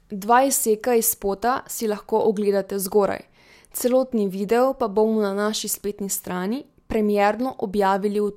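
No technical faults are audible.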